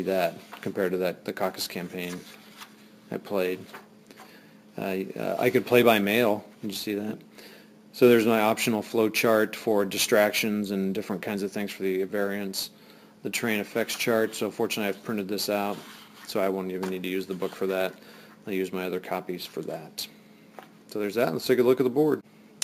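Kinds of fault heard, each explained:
Imaging from sample-and-hold upsampling: The rate was raised by holding each sample, with no smoothing filter afterwards. This leaves mirrored copies of the spectrum around multiples of the original rate, which here points to 16 kHz converted to 44.1 kHz. The first copy fills the 8 to 16 kHz band, about 18 dB below the sound. It is heard as a bright, metallic fizz that rises and falls with the sound, and it moves opposite to the pitch.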